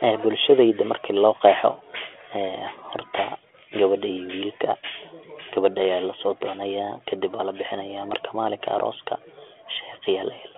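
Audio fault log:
Nothing stood out on listening to this speech clip.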